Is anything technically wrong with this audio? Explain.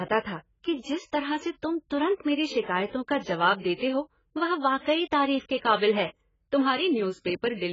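Yes. Throughout the speech, nothing reaches above 7.5 kHz, and sibilants and held sounds warble and fizz. This is likely heavy AAC compression at a very low bitrate, around 12 kbps. Coarse quantisation drops the top band and leaves spectral holes. A plain low-pass filter would dull the sound without that swirling texture.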